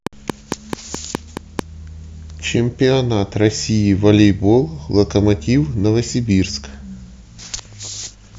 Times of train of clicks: 0.07-1.60

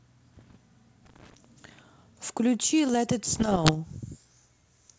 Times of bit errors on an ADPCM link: 0.32-0.57, 3.35-3.77

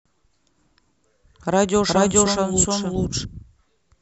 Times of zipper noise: none

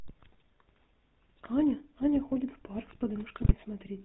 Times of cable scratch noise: none

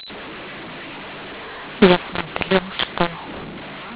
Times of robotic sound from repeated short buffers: none

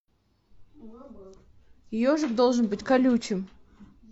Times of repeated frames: none

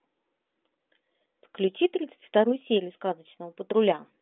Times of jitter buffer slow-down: none

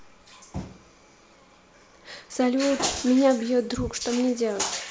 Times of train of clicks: none

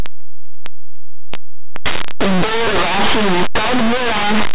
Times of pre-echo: none

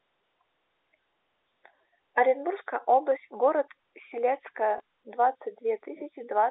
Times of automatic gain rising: none

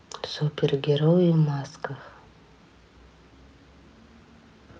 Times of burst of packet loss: none

